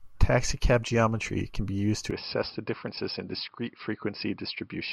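Speech, and at 2.11 s it abruptly turns duller and a few dB quieter through to the end, with no gap at the changeover. From there nothing comes through above 5.3 kHz, so the top end is simply gone, and a faint new background noise sits far below the speech. That combination points to an input switched to a poorer device, likely the system dropping to another mic or a headset's call profile mid-recording.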